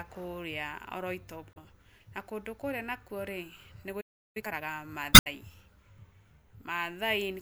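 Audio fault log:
1.51–1.57 s, damaged data in a compressed stream. Just before "na kũndũ kũrĩa" a short glitch cuts into the speech. Some bytes in the coded stream were wrong. The decoder misread those frames and lost its place. It then hunted for the next valid frame header. That gap, about 70 ms, is heard as a blip.
4.00–4.37 s, playback stall. The speech stops abruptly mid-flow. Output stays silent for about 350 ms. The player most likely ran short of data, or its thread was held up. Nothing reached the output until it recovered.
4.37–4.71 s, time-compressed catch-up. Right after the stall the speech rushes. It runs at about twice normal speed, yet pitch stays normal. The player is draining its backlog. It drops small slices and cross-fades the rest together.
5.11–5.27 s, damaged data in a compressed stream. A second burst of corrupted frames, about 160 ms long. The decoder again fails on bad data and resynchronises on a later header.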